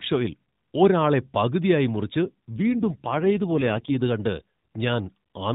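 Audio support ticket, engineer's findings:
AMR rate drop, 2.23–3.97 s, right after "ഷോയിൽ ഒരാളെ പകുതിയായി മുറിച്ച്": link-adapted AMR mode switch, consistent with 12.2 to 5.9 kbps. Speech turns rougher, more synthetic; same narrowband, no gap.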